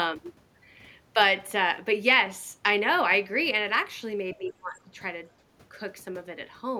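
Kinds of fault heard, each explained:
Speech suppressed in double talk: from 4.36 to 4.95 s the speech level sinks sharply, by roughly 20 dB at its deepest, for about half a second. The likely cause is an echo canceller mistaking simultaneous talk for loudspeaker echo and attenuating the near talker.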